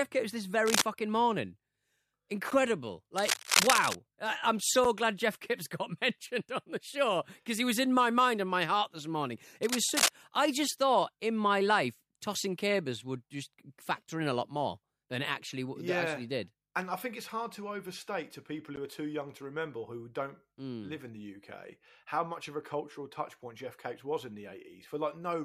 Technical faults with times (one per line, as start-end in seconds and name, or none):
0.66-0.84 cable scratch noise
2.50 gap at a join of encoded pieces
3.17-3.95 cable scratch noise
4.84 gap at a join of encoded pieces
9.63-10.11 cable scratch noise
18.76 gap at a join of encoded pieces